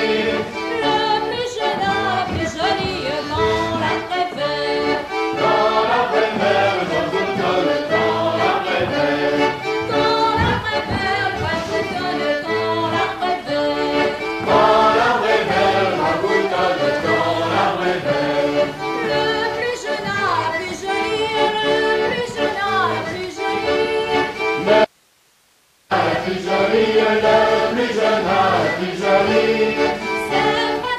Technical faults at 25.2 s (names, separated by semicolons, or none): audio dropout to a faint residue